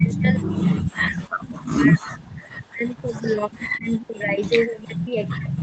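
From 0.0 to 4.43 s and again from 4.64 s to the end, the speech dips steeply, by up to about 40 dB. This is likely speech suppressed in double talk, with the echo canceller turning the talker down while the far end spoke.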